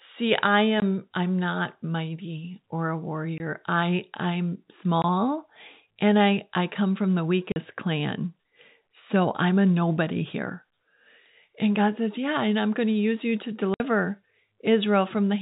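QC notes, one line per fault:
0.80–0.82, 3.38–3.40, 5.02–5.04, 7.52–7.56, 13.74–13.80 s: packet loss filled with silence. Speech drops out abruptly for 20, 40 or 60 ms, multiples that fit a 20 ms packet. Missing audio was replaced by plain silence, so the G.711 telephone band simply stops and restarts.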